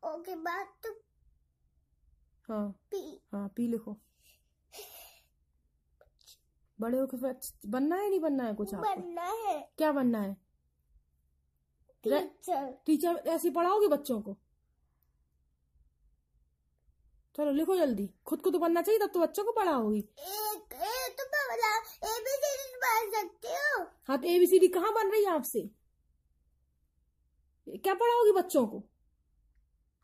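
Nothing in the audio stood out as a technical problem on listening.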